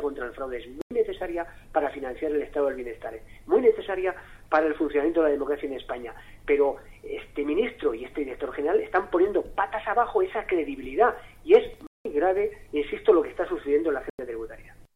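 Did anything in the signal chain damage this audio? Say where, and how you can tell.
Yes. The damage is at the codec stage: corrupt frames were muted. Silence cuts in abruptly at 0.82 to 0.91 s, again from 11.87 to 12.05 s, and from 14.02 to 14.19 s. The first gap points to one lost frame, the later ones to two. The decoder rejected frames with flipped bits, and the player filled those slots with silence. Unlike a network dropout, the gaps are hard-edged and timing stays intact.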